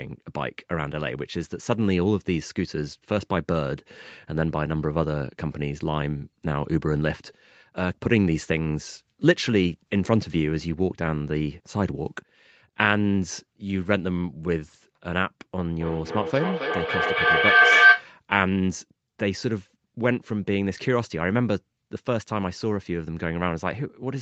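From 15.8 to 18.13 s there's a feedback howl: a loop between microphone and loudspeaker keeps gaining, its repeats coming about every third of a second and building a whistle near 1.5 kHz that peaks about 8 dB above the speech.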